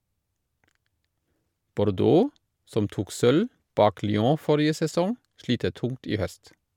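No audible faults anywhere in the speech.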